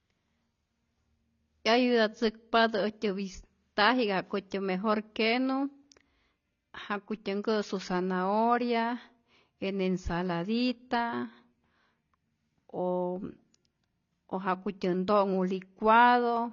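Throughout the speech, nothing is heard above 6.9 kHz, so it sounds dull. Sibilants come out fizzy and smeared. The likely cause is AAC compression at a low bitrate, which fits about 24 kbps. The encoder discards detail its hearing model judges unimportant.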